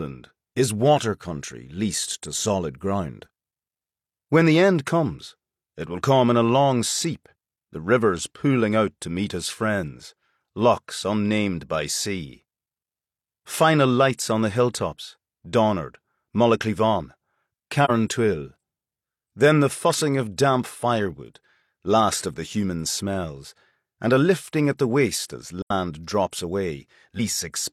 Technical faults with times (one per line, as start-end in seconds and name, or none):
17.84-17.91 AAC frame loss with muting
25.62-25.71 AAC frame loss with muting